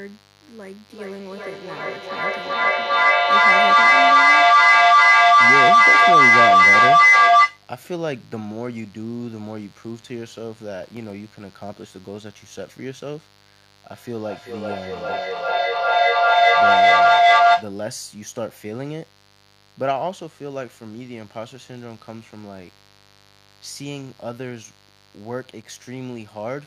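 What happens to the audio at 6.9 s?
At 6.9 s the speech sits under a feedback howl that runs from 0.92 s to 7.67 s, so this moment falls near its end. Two devices on the same call in one room form a loop from microphone to loudspeaker and back, and each trip adds level. The repeats narrow to a tone around 1 kHz, pulsing roughly every 0.4 s, and peak about 16 dB louder than the speech. On a spectrogram it shows as a bright, thickening horizontal line near 1 kHz with periodic swells. On the waveform the envelope balloons and pulses.

Under this, a mains buzz from 50 Hz power runs through the whole clip, roughly 20 dB below the speech. Sharp switching spikes from a dimmer, a rectifier or missing shielding get in twice every cycle. The resulting harmonics of 50 Hz stretch into the kilohertz range and give a steady, raspy edge. A spectrogram shows evenly spaced horizontal lines at 50 Hz multiples from the bottom upward. 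The waveform carries a small repeating spiky pattern every 10 ms, visible in pauses.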